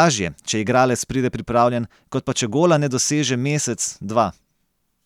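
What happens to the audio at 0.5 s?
Nothing goes wrong at 0.5 s; the speech passes through that moment intact, with no dropout, click, distortion or other fault.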